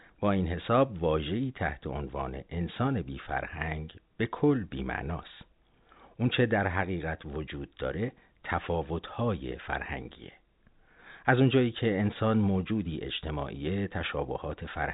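No technical faults can be heard in the speech, which carries the narrow, telephone-band character of G.711 telephone coding with nothing above 4 kHz and only the faint, level-following quantisation noise of that format beneath it.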